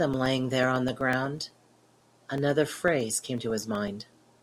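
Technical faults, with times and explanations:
0.14–4.38 s: periodic USB or driver dropouts. Every 0.125 s, roughly 2 ms of speech is replaced by silence as the driver stalls, giving around forty regular ticks. The waveform shows evenly spaced flat gaps, and the spectrogram shows thin broadband vertical stripes.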